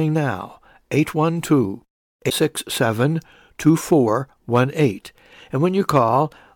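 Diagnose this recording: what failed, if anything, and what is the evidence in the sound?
Broken MP3 bit reservoir, 2.29 to 2.32 s: for about 30 ms the speech jumps forward and a brief disturbance sits in the gap. The fault lies at the codec stage, and the likely cause is a lost stretch of MP3 data. That disturbance lasts roughly one 26.1 ms frame. After the cut, the next frame reached back into the reservoir for bits it had stored earlier, found bytes belonging to a different frame, and decoded the wrong data.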